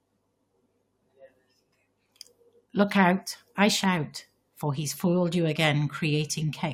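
No technical faults can be heard in this recording.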